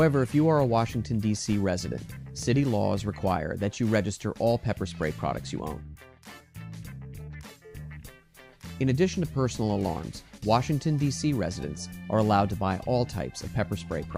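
At 2.43 s and again at 10.38 s the sound skips forward abruptly, with the material on either side butted together and no gap of silence between them. Each jump drops roughly 20 ms. These are instances of audio missing between chunks, likely from a recorder working in 4-second blocks and losing a sliver each time it hands over from one block to the next.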